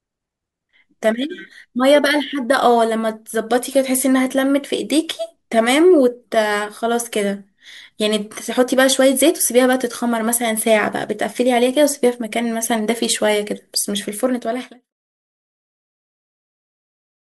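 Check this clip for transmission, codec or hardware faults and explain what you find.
Nothing here points to a fault, and the smooth fade out that begins around 14 s and finishes at 14.93 s sounds like an ordinary editor's fade with no click or hard edge.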